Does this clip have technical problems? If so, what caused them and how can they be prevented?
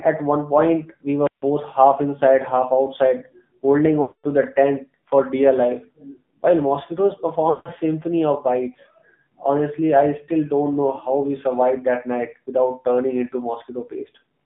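Yes. The speech was carried over the AMR narrowband mobile codec throughout. Everything sits between about 150 Hz and 3.6 kHz, and the voice has that buzzy, synthetic edge that fits a low mode around 7.4 kbps. To prevent it, route the call over a wideband codec like AMR-WB or EVS, or record locally instead of through the phone network.

There are also two runs of lost AMR speech frames. The first runs from 4.02 to 4.27 s, between "inside half outside holding" and "the tent for dear". It lasts about 220 ms, which fits roughly eleven 20 ms frames. The second runs from 7.50 to 7.70 s, between "dear life while mosquitoes" and "symphony of bites", and lasts about 160 ms. In both, the decoder stretches the last good sound and fades it toward silence, and the voice comes back a bit rough. To prevent this, get a stronger, more stable radio link, for example by moving to better coverage or using Wi-Fi calling.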